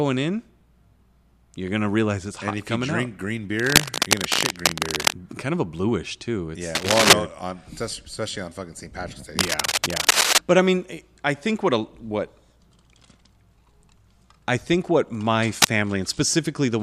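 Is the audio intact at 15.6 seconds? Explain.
No. Right after "I think what my", from 15.62 to 15.77 s, a rough scratching burst sits above the speech. It is cable scratch noise, likely from a worn cable or connector shifting.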